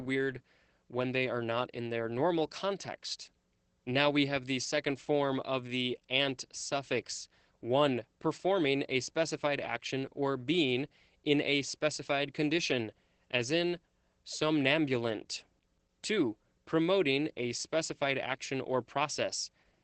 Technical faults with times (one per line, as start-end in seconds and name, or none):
0.00-19.83 Opus voice compression